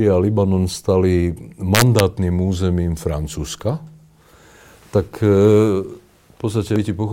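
Integer overflow runs from 1.75 to 2.0 s. Loud speech peaks, pushed about 2 dB past the integer ceiling, wrap around to the opposite sign instead of being held at the limit, so each one swings across the full range and cracks far more harshly than clipping would.

Damaged data in a compressed stream shows up at 6.76 s. Corrupted bytes there leave the decoder unable to read the frame, so it loses sync and hunts for the next valid header. The result is a brief glitch in the audio.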